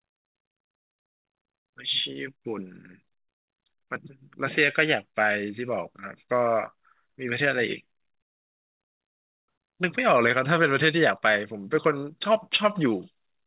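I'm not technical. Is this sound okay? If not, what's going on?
Yes, this sound is okay; it comes across the way speech normally does over a phone-style call connection.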